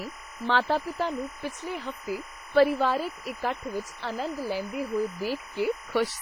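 A steady chirping warble runs behind the speech from start to finish, flipping between pitches near 1 kHz and 2 kHz at roughly 15 dB below the voice. This is timecode bleed: linear timecode at 25 frames per second leaking in from an adjacent track or cable.

Throughout, the speech also carries heavy ringing, washy smearing and hiss that swells and falls with the voice, with nothing above 21.4 kHz. This points to WMA compression, likely at a low bitrate around 24 kbps, where long transform blocks spread quantisation noise over tens of milliseconds and weak detail is dropped.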